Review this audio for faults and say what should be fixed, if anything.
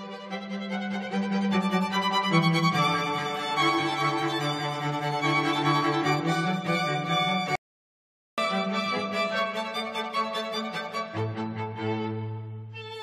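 An audio dropout to silence runs from 7.55 to 8.38 s. The sound stops dead for 0.82 s. The input was likely lost while silence kept recording. Monitor the input and secure connections during capture.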